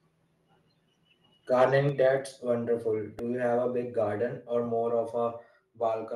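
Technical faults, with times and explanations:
1.60–1.65 s, microphone overload: For about 50 ms the loudest part of the speech is pushed roughly 4 dB past the converter's limit, so roughly 7% of the samples are sheared flat against that limit. Those squared-off tops add a harsh, crackly edge, most likely because the input volume was set too high for the converter. A spectrogram would show a brief smear of broadband energy climbing well above the normal speech harmonics.
1.89 s, microphone volume stepped down: The whole signal, speech and background together, drops by about 5 dB in a single step rather than a gradual fade, audible as the sound suddenly becoming quieter just after the distorted peak. This is likely the call software reacting to the overload by cutting the device's input volume. On the waveform the envelope shows a clean, abrupt step down, and the spectrogram darkens evenly across all frequencies from that point.
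3.19 s, repeated buffer: A tiny slice of about 1.45 ms is played four times in a row, which fits a 64-sample buffer being replayed three extra times while fresh audio failed to arrive. Each copy meets the next at a hard join, so the result is heard as a short click or brief buzz rather than a stutter. Zoomed in, the waveform shows identical short segments repeating; the spectrogram shows a thin vertical line of energy.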